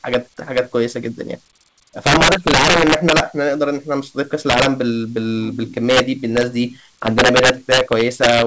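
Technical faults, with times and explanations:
0.14 s, integer overflow: a gain or sum briefly exceeded the integer limit by about 2 dB and wrapped to the opposite sign, giving a sharp crack.
2.07 to 3.20 s, integer overflow: peaks driven about 8 dB past the integer limit repeatedly wrap across the full range instead of limiting, producing violent cracking far harsher than clipping.
4.50 to 4.66 s, integer overflow: loud peaks about 4 dB over the limit wrap to the opposite sign, causing a short burst of sharp cracks.
5.90 to 6.00 s, integer overflow: an overdrive of about 4 dB sends peaks past the largest integer so they flip sign, heard as a brief violent crack.
7.07 to 8.42 s, integer overflow: peaks about 5 dB over the limit keep wrapping across the full range, giving sustained harsh cracking on the loud parts through the G.722 call path, which has nothing above 8 kHz.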